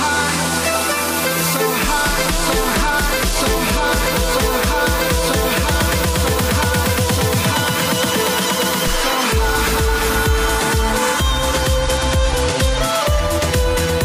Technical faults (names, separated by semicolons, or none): Bluetooth SBC bit pool drop